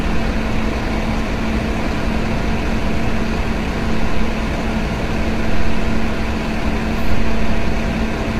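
Throughout, the sound is rough and grainy with a dulled top band, likely low-delay AAC compression at a rate near 24 kbps; spectrograms show smeared harmonics and noise-filled gaps.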